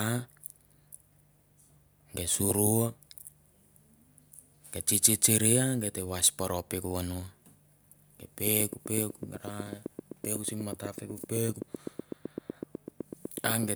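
Interference from nearby equipment or a faulty connection or power supply is the likely source of a train of clicks from 8.47 s to 13.64 s. Around forty similar pulses arrive at a steady 7.95 per second, ticking over the speech and into its pauses, peaking well above the speech level.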